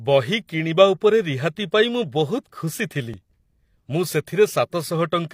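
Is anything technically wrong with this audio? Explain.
Yes. There is one fault, an overlap between stream segments, from 3.14 s to 3.17 s in this speech clip. Two adjacent segments carried time stamps that overlapped. The player trimmed the overlap, but the audio there was never actually duplicated. About 38 ms of real sound was therefore discarded. The waveform jumps straight from one point to a later one. It is heard as a tiny skip forward in the speech.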